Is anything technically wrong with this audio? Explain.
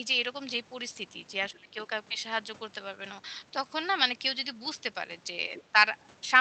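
Yes, there are two faults, both consistent with echo cancellation on a call link whose upper limit of about 8 kHz matches a wideband Opus stream.

Speech suppressed in double talk, from 1.52 to 1.78 s: both ends were most likely talking at once, and the echo canceller, unable to tell the near talker from the loudspeaker echo, pulled the whole signal down. The speech sinks by as much as about 20 dB for roughly a third of a second.

Other side's voice leaking through, from 5.54 to 5.63 s: the far end's audio played from the loudspeaker was likely not fully cancelled at the microphone, so a brief scrap of a second voice slips into the recording. It sits about 20 dB below the main speech, short and faint.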